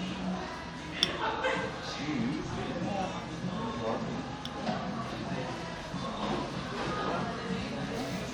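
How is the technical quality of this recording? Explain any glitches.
No technical glitches can be heard anywhere in this recording.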